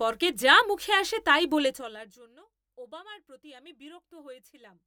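A speech clip with zipper noise from 1.62 to 2.22 s, just after "যা মুখে আসে তাই", where the level drops by roughly 25 dB in 3 dB jumps at about fifteen steps a second. Each unsmoothed jump leaves a small click, so the fade carries a rapid ticking. That ticking separates it from a smooth fader move, which glides down with no clicks.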